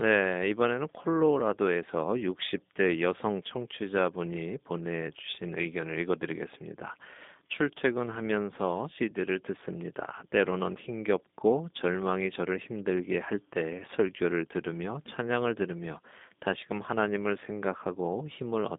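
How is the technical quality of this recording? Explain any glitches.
The speech is noticeably degraded throughout by the G.729 codec. It sounds narrow, thin, slightly rough and synthetic, with nothing above 3.7 kHz or below 200 Hz. Speech is rebuilt from a vocal tract model and sparse pulses, which fits an 8 kbit/s VoIP link.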